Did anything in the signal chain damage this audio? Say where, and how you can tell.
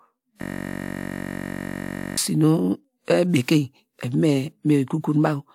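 Yes, a system hang loop at the driver buffer, 0.42 to 2.18 s. The driver froze, so one 21.33 ms slice replays as a steady 46.9 Hz buzz.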